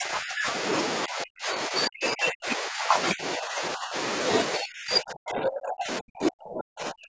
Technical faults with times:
0.00-0.53 speech suppressed in double talk
1.06-3.95 speech suppressed in double talk
4.55-7.09 speech suppressed in double talk

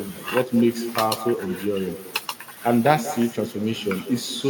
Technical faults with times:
0.00-4.49 echo with no canceller

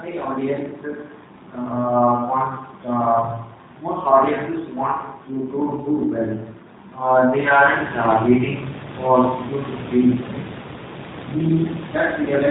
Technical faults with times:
0.00-12.51 G.729 codec

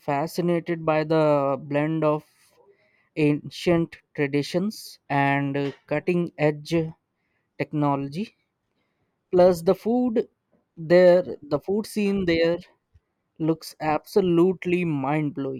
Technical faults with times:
none

